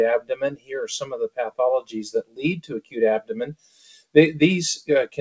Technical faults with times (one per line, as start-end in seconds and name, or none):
0.00-5.21 noise suppressor applied to music or sounds
0.20-0.72 sound cut by the noise suppressor
1.03-1.59 sound cut by the noise suppressor
2.23-2.97 sound cut by the noise suppressor
3.52-4.15 sound cut by the noise suppressor